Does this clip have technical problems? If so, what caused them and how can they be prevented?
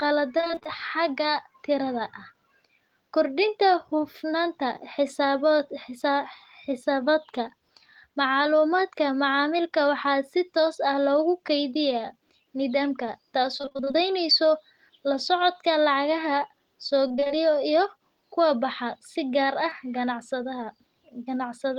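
Yes. Repeated packet loss (robotic sound) occurs at 0.37–0.67 s, 13.58–13.97 s and 17.08–17.32 s. Packets kept arriving too late or not at all, in gaps of up to about 24 ms. The receiver patched each one by extending the previous sound, so about half of each stretch is synthetic fill and the speech turns choppy and robotic. A steadier network path, forward error correction or a larger jitter buffer would prevent this.

A short concealed packet loss occurs at 19.70–19.73 s. About 20 ms of audio never reached the decoder, and its replacement causes a brief smear as playback blends back into the real signal. Packet redundancy or a slightly deeper jitter buffer would let the missing piece arrive in time.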